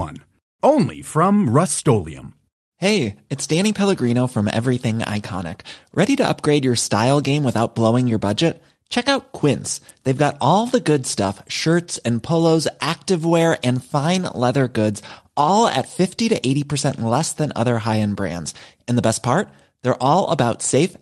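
A speech recording with no technical faults to report. No moment in it calls for a time or a cause.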